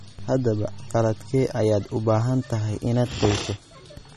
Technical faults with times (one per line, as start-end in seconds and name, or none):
0.00-4.16 MP3 compression